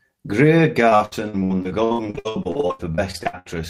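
From 0.89 s to 3.47 s the speech stream suffers repeated packet loss (robotic sound): packets keep arriving lost or late, and the receiver patches each hole by stretching out the last audio it had. Over this span of about 2.6 s the dropouts come in quick succession, 27 short holes, the longest 76 ms, with 38% of the span filled by concealment. The speech turns choppy, with fragments missing throughout.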